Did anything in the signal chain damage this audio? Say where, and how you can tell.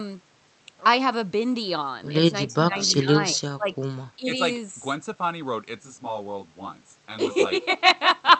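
Yes. The call processing stage cut into the speech at 2.51 to 2.76 s, 2.98 to 3.73 s and 4.16 to 4.39 s. Level drops by about 10, 20 and 15 dB before it recovers. This pattern points to speech suppressed in double talk: the echo canceller, likely overlapped by far-end audio, ducked the near talker. Packet loss would leave abrupt gaps or smeared concealment rather than these graded dips.

A second fault enters at the driver or buffer stage from 5.77 to 8.29 s. The sound turns rough and slightly doubled, with fixed notches starting near 30 Hz and repeating at even spacing. That is channel delay (comb filtering): one channel lags by around 20 ms and is summed to mono, so shared content cancels at regular frequencies. Codec band-limiting would cut only the top end, not carve repeating notches across the spectrum.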